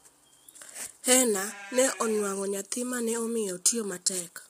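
Throughout this speech clip the voice sounds rough and grainy, with noise between the harmonics, likely from heavy low-delay AAC compression whose short frames blur pitch detail, which fits a bitrate around 24 kbps.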